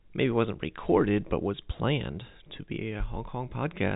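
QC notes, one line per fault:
Nothing stood out on listening to this telephone-band speech, which carries G.711 telephone coding with no content above about 4 kHz.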